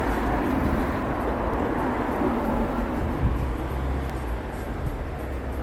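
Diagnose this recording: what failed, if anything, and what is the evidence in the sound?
Codec stage: generation loss, likely from about seven MP3 passes at a rate near 96 kbit/s. The sound is swirly and hollow with blurred attacks; the spectrogram shows holes.

Driver or buffer stage: likely dropped buffers (overrun) cause forward jumps at 1.02, 1.54, 3.24, 4.10 and 4.86 s. Roughly 300 ms is lost first, then about 100 ms each, leaving splice discontinuities in the waveform.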